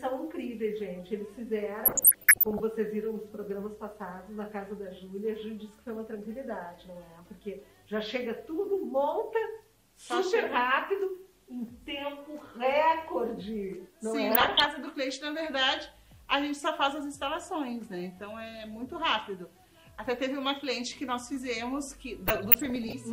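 DAB burbling occurs at 1.85–2.6 s, 14.30–14.66 s and 22.28–22.93 s. Bit errors from weak reception slip past error correction into the MP2 audio, so corrupted samples put short noise blips in single sub-bands and corrupted scale factors make sub-bands jump in level for up to a frame. The result is burbling, heaviest in the first burst.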